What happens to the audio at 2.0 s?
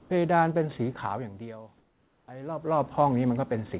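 From 1.78 to 2.28 s, the room background gives way to steady, featureless noise about 3 dB quieter: comfort noise in place of the background, likely because the sender's voice detector paused transmission and the receiver synthesised filler. On a spectrogram the textured background becomes a smooth, uniform wash. On the waveform it is an even, flat noise floor.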